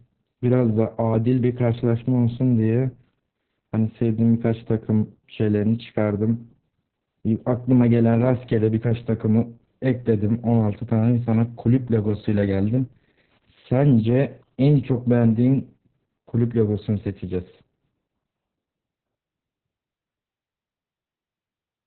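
From start to finish the speech has been squeezed through Opus voice compression running in its narrowband SILK mode at a very low rate, with heavy damage that fits roughly 6 kbps. The coder has discarded everything above about 4.3 kHz and models the excitation crudely, so the speech sounds muffled and boxy, hoarse, slightly robotic, with consonants dulled and a grainy, buzzy texture in place of natural breath and sibilance.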